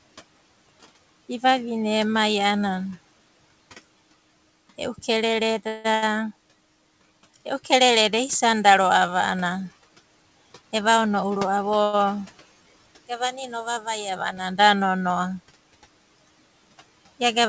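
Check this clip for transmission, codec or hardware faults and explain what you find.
Four transmission faults show up, clustered around 5.7 to 6.0 s and 10.6 to 12.0 s. The audio passes through a G.722 call path that leaves nothing above 8 kHz, and room noise sits about 21 dB below the speech.

From 5.68 to 5.86 s there is a call audio freeze. Packets were likely held up in transit, so the jitter buffer ran dry and the receiver filled 164 ms by continuing the last sound. You hear a buzzy or hissy extension that fades before the speech picks up exactly where it stopped. Nothing is lost, but the stream now runs 164 ms later than before.

From 5.94 to 6.04 s comes a burst of packet loss. About 80 ms of audio never arrived in time to play. The receiver covered the gap by carrying the last sound forward and turning it down, which gives a brief, dimming buzz or hiss. When playback resumes it has jumped ahead, and that 80 ms of speech is gone for good.

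Between 10.62 and 11.79 s a jitter buffer speed-up takes place. Audio had piled up in the buffer beyond its target, so the receiver trimmed out many short pitch-period slices, around a tenth of a second in all. The speech plays at 110% speed while keeping its pitch. That makes it sound hurried and clipped in rhythm rather than higher or chipmunk-like.

Right after, from 11.84 to 11.95 s, there is a short stall from a late packet. A packet missed its playout slot and the buffer emptied, so the receiver stretched the current sound for 96 ms until the packet arrived. It then carried on from the same point. The result is one sound held unnaturally long with a faint buzzy or dipping quality, and no speech missing.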